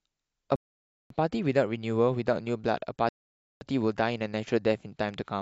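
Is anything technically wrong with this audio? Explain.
Yes, the speech stops twice with rebuffering stalls, from 0.56 to 1.11 s and from 3.09 to 3.61 s. Each adds about half a second of silence (0.54 s and 0.52 s). The player ran out of downloaded audio, paused output until more data arrived, then carried on exactly where it halted. This sets it apart from a dropout or packet loss: no speech is missing on either side of the gap, so the timeline is stretched rather than cut.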